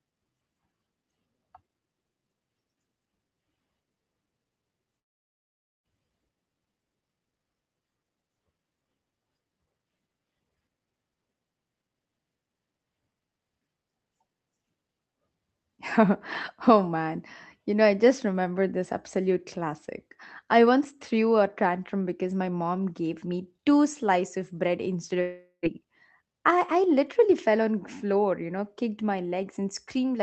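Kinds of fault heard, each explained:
Long network dropout: at 4.99 s for about 0.87 s, and at 25.21 s after "slices of bread instead" for about 0.44 s, the last sound smears into a fading buzz, then near-silence, and speech resumes with that stretch gone, likely from lost packets.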